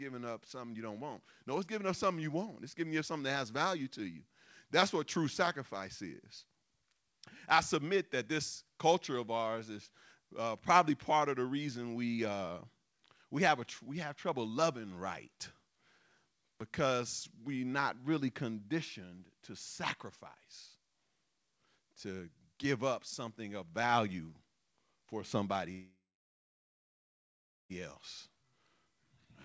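A call audio freeze runs from 25.72 to 27.72 s in this speech recording, which carries the 8 kHz band limit of a call codec consistent with G.722. Delayed packets likely drained the jitter buffer, so the last sound was stretched into a fading fill that falls silent for about 1.7 s. Playback then resumes where it stopped, inserting a 2 s gap with nothing lost. A jitter buffer speed-up follows from 28.29 to 29.26 s. With too much audio queued after the stall, the receiver trimmed out many small pitch-period slices, roughly a tenth of a second in total, so the speech plays at 111% speed with unchanged pitch and sounds rushed.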